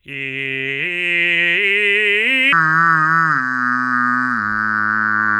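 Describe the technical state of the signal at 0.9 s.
At 0.9 s the music signal is intact, with no audible fault at that moment.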